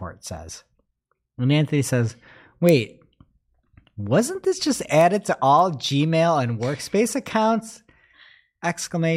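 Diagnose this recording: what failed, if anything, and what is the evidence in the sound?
Word clock ticks at the digital interface: sharp ticks of uneven strength run through the speech at roughly half-second intervals from 0.37 s to 9.08 s. The receiving converter isn't locked to the sender's clock, so each drift cycle slips a single sample.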